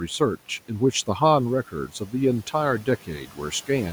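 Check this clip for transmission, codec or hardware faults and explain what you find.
The one fault is speech cut by the noise suppressor, in two places. From 1.72 to 2.13 s and from 3.26 to 3.39 s, the suppressor treated parts of the speech as noise and turned them down with the room noise, which sits about 21 dB below the speech. The drops reach about 9 dB and about 11 dB, so those sounds come out swallowed and faint. Unlike a packet-loss dropout, the audio never goes fully silent or clicks; it just sinks briefly in level.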